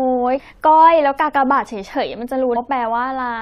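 Throughout the speech there is a watery, swirling quality, with sibilants breaking into metallic chirps and consonant onsets smeared. The likely cause is MP3 compression at a bitrate of around 64 kbps. With too few bits, the encoder cuts off the treble and lets weak frequency lines flicker on and off from frame to frame. This coloration is constant and steady, which sets it apart from the two sudden events below.

From 0.36 to 0.40 s, and again from 2.52 to 2.57 s, a short glitch interrupts the audio, each lasting about 40 ms. These are damaged data in a compressed stream. Corrupted bytes make the decoder misread its frames, lose sync and hunt for the next valid header. Unlike the continuous compression swirl, each fault is a sharp, isolated blip that is over almost at once.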